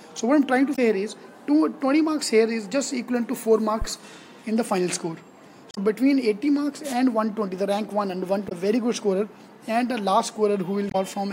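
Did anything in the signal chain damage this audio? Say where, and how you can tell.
Yes, two stages. At the codec or storage stage there is damaged data in the compressed stream. Short bursts of about 70 ms each sit at 0.72–0.79 s, 5.71–5.78 s, 8.45–8.52 s and 10.88–10.95 s, and each is heard as a chirp, squawk, click or short hole. Corrupted bytes make the decoder misread those frames, lose sync and hunt for the next valid header. A spectrogram shows each one as a narrow vertical smear of wideband or blocky energy unrelated to the surrounding sound.

In the analogue wiring before the converter, a phantom power thump lands at 3.82–3.87 s. It is a deep, low thud that dies away in about 13 ms. Switching phantom or another supply on a live input sends a DC step through the coupling capacitors, and the capacitors bleed that step off quickly. On the waveform it appears as a sudden one-sided excursion relaxing back to zero. 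On the spectrogram it is a brief bright patch confined to the lowest frequencies.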